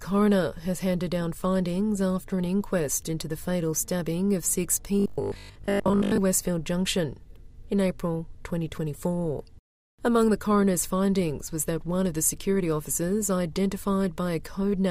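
From 5.00 to 6.18 s the audio collapses into a rigid, metallic 50 Hz buzz that still loosely tracks the original contour: robotic sound from repeated short buffers. The likely cause is fresh audio arriving too seldom, so playback loops the last 20 ms segment over most of that stretch while real material is skipped. Unlike a stutter or dropout, there are no audible gaps or repeated syllables, just a steady imposed pitch.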